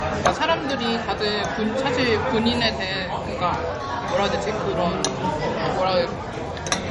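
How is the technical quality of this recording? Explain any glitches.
The technical quality is limited by one fault that runs through the whole recording. It is a case of low-bitrate audio saved at a high bitrate. Nothing is present above 11.2 kHz, and the sound carries the smeared, swirly texture of heavy MP3 compression. The large file was most likely re-encoded at a generous rate from a copy made much smaller, perhaps around 48 kbit/s. The second pass can't restore what the first discarded. The artefacts alongside the sharp ceiling distinguish it from plain low-pass filtering.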